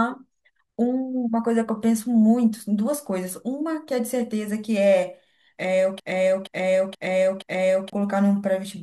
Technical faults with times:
6.00-7.93 broken-record loop

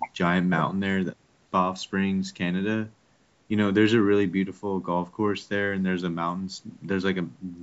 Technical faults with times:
none

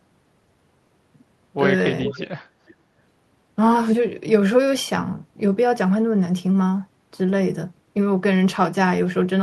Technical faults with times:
2.01-2.29 echo leak
2.66-2.75 echo leak

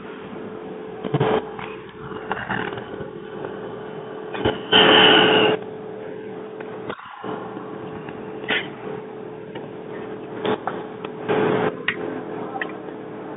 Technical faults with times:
0.00-13.37 Bluetooth CVSD headset codec

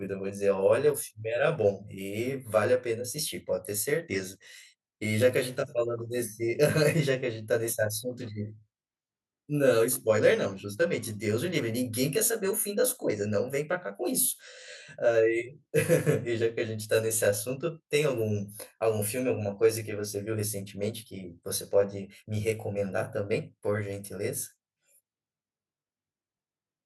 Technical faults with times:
0.00-26.85 channel delay (comb filtering)

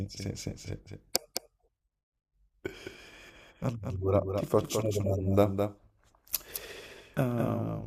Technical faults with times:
0.00-7.86 doubled audio track

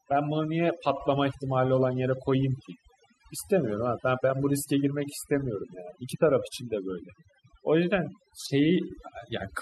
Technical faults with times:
0.00-9.61 overdone noise removal

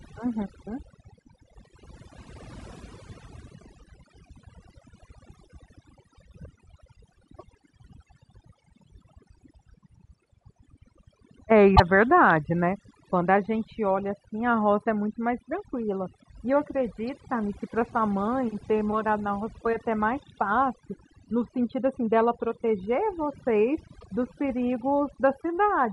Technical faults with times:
0.00-25.92 overdone noise removal
3.79-3.81 damaged data in a compressed stream
7.36-7.43 damaged data in a compressed stream
11.72-11.80 damaged data in a compressed stream
23.96-24.04 damaged data in a compressed stream

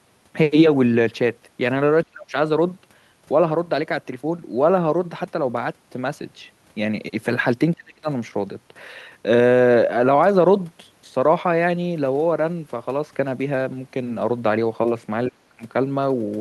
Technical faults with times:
2.03-2.35 speech suppressed in double talk
7.75-8.08 speech suppressed in double talk
15.29-15.63 speech suppressed in double talk

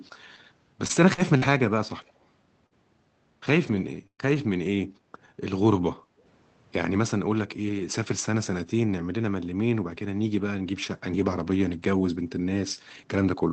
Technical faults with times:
0.87-1.53 repeated packet loss (robotic sound)
2.08-2.25 echo leak
2.66-2.74 short concealed packet loss
3.67-3.79 lost packet rebuilt from error correction
4.07-4.21 burst of packet loss
4.34-4.38 lost packet rebuilt from error correction
5.99-6.19 background gated by the echo canceller

